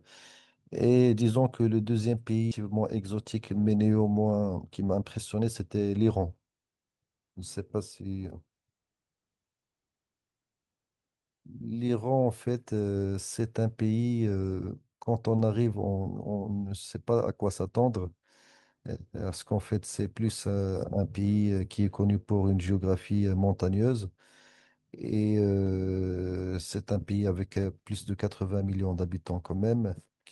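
At 2.51 s the speech lurches forward: the talker seems to jump mid-flow, with no pause and no fill, as if a chunk of the sentence simply vanished. That is a skip ahead. Roughly seven tenths of a second of audio never reached playback, most likely dropped in transit or discarded when the jitter buffer overflowed while newer audio was already queued. The two sides of the gap are butted straight together, so the listener hears a splice rather than silence.

From 4.42 s to 5.73 s the speech turns noticeably hurried, running at about 112% of normal rate while the pitch stays put. That is a jitter buffer speed-up. The buffer was holding more audio than it wanted, so the receiver trimmed tiny slices of one or a few pitch periods, over and over, until around 150 ms had been shaved away. That shortened the stored delay at the cost of a rushed, compressed delivery.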